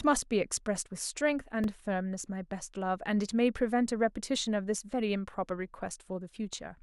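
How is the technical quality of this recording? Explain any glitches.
The recording has one audible glitch, a single repeated-buffer event in the speech.

A repeated buffer occurs at 1.64 s. The next block of audio didn't reach the playback device in time, so it replayed the block it already held. Here that block is only about 1.3 ms long, which fits a 64-sample buffer. It sounds twice, with a hard join at the repeat, and a millisecond or two of real audio is skipped. Because the piece is so short, this comes across as a brief click rather than a stutter.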